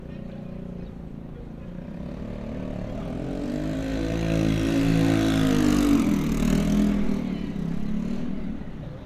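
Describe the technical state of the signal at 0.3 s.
At 0.3 s the signal is intact, with no audible technical fault in the audio at that moment.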